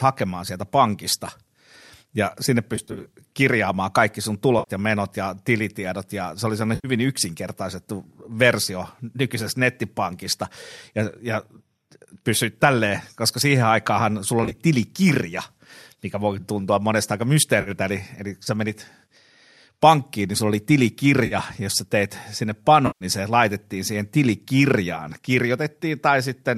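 AAC frame loss with concealment occurs at 2.76–3.12 s (between "ja sinne" and "kirjaamaan kaikki sun", 180 ms lost in short runs of around 40 ms across 360 ms), 4.59–4.71 s (before "ja menot ja tilitiedot"), 6.75–6.88 s, 14.44–14.58 s (80 ms in short runs), 17.61–17.70 s (before "eli eli sä menit"), 21.26–21.35 s and 22.87–23.05 s. The decoder rebuilds each missing frame from the last good spectrum. These losses run 50 to 180 ms, which fits the 10 ms frames of the likely low-delay AAC stream, so none lasts long enough to fade toward a noise floor. Each one instead sounds like a smeared, phasey patch. That sets it apart from a plain dropout, which would leave a silent gap or a click.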